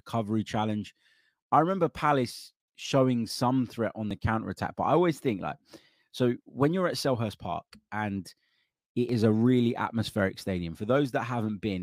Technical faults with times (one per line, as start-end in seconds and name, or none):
4.11 audio missing between chunks
9.09 audio missing between chunks